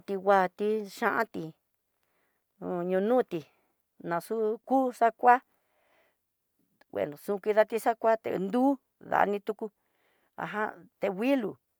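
No dropouts, clicks, distortion or other technical faults can be heard anywhere in the speech.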